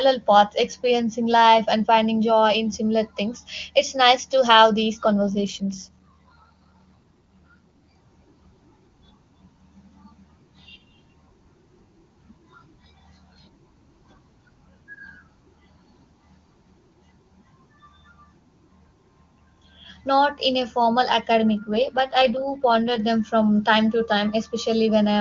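At 5.03 s, right after "nice to have these", an AMR rate drop sets in and lasts until 7.93 s. It recurs from 21.60 to 22.99 s, between "in a formal academic" and "them from time to". In each stretch the speech turns rougher and more synthetic, which fits a weak radio link forcing the AMR-WB codec down from 23.85 to 8.85 kbit/s so that bits go to error protection instead. On a spectrogram the band edge near 7 kHz and the continuous waveform stay intact, with no gap. Harmonics look smeared and grainier until the rate recovers.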